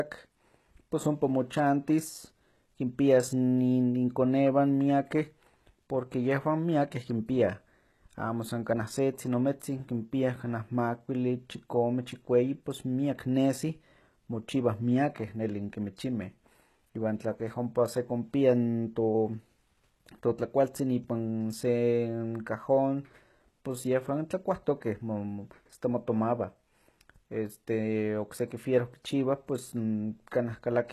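Speech runs throughout with plainly audible codec damage. The treble stops dead at about 12.3 kHz, and the upper band sounds synthetic, with gritty, lispy sibilants whose harmonics don't line up with the lower range. That points to likely HE-AAC compression at a low bitrate, around 16 kbps, rebuilding the treble by spectral band replication. Unlike plain low-pass filtering, which leaves dull but clean highs, this band is present but false. Three pre-echo events occur: at 9.6 s just after "amo san kaneh setzin", at 15.15 s after "pos miak nesi mochiwah", and at 24.8 s after "cajón pos yehwan". Each is a hiss lasting 13 to 17 ms that leads into a sharp onset and softens its attack. It happens because the transform block spreads quantisation noise sized for the loud onset back into the silence before it. It differs from a click or dropout because the noise comes before the attack rather than interrupting the sound.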